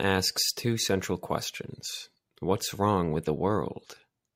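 Speech recording with no audible technical faults anywhere in the clip.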